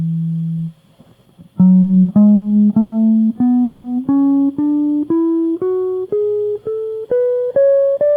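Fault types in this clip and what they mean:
Short stall from a late packet: The music briefly hangs on one sound, held with a faint buzz or dip for about 30 ms at 1.81 s and 2.02 s and 70 ms at 2.35 s. A packet arrived late, the jitter buffer ran dry, and the last sound was stretched until playback resumed from the same point.
Call audio freeze: At 2.80 s the music stops moving for 120 ms and at 3.64 s for 200 ms, with the last sound carried on as a fading buzz or hiss rather than silence. The likely cause is delayed packets emptying the jitter buffer, so a gap was inserted before the audio picked up where it left off.
Jitter buffer speed-up: From 6.84 to 7.95 s the music rushes forward at 114% speed with unchanged pitch, so the tempo stops being steady. The buffer had built up extra delay, and the receiver shed roughly 150 ms by cutting many tiny pitch-period slices.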